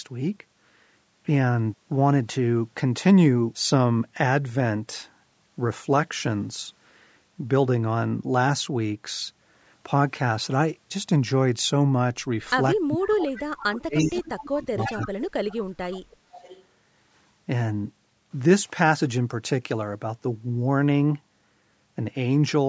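Speech suppressed in double talk first appears from 12.85 to 14.14 s. The voice sinks by as much as about 35 dB for roughly a second in total. This is likely because the echo canceller, faced with both sides talking at once, could not tell the near talker from the loudspeaker's sound and pulled everything down.

Echo leak follows inside that span: faint scraps at 13.36 to 13.42 s and 13.58 to 13.64 s, about 20 dB under the speech, then a longer, stronger tail from 13.97 to 14.49 s at about 15 dB down. Each is a copy of the voice arriving 341 ms late. The canceller on the loudspeaker side likely failed to remove all of what its microphone caught from the loudspeaker and sent it back.

The dips return from 14.63 to 15.11 s, reaching about 25 dB over roughly a third of a second. Overlapping them, another leak runs from 14.8 to 15.22 s at about 15 dB below the speech.

A third stretch of suppression runs from 15.3 to 16.4 s, with drops of about 30 dB across roughly a second. 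It ends in a last, quieter echo from 16.33 to 16.64 s, about 25 dB down, still trailing by 341 ms. Throughout, the call's microphone processing leaves nothing above 8 kHz.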